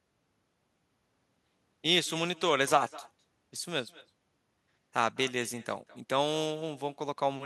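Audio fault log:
Throughout, echo with no canceller: each phrase returns roughly a fifth of a second later, about 21 dB quieter and thinner, from a far-end loudspeaker feeding its microphone unchecked.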